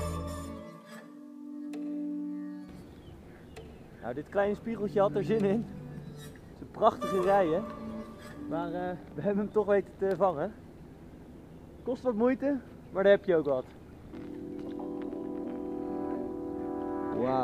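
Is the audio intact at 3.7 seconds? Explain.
Yes, at 3.7 seconds the audio plays through cleanly, with no dropout, click, distortion or other fault.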